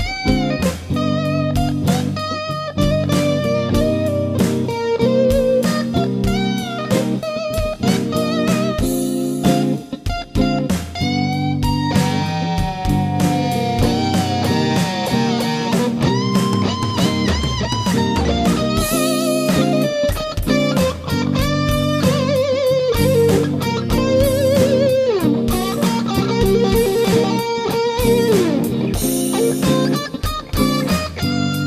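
No technical faults can be heard in this audio.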